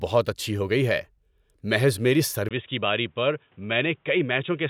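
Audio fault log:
2.49 to 4.70 s, input switched to a poorer device: the recording likely changed over to a narrower-band input after a brief 20 ms gap. Nothing above 3.8 kHz survives, so the speech turns dull and boxy, drops slightly in level and gains a faint new noise floor.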